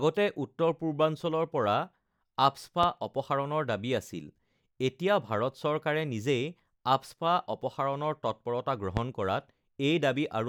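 Loud pops at 2.83–2.86 s and 8.97–9.00 s: single sharp thumps well above the speech, likely voltage spikes. Unlike a dropout, the speech continues underneath.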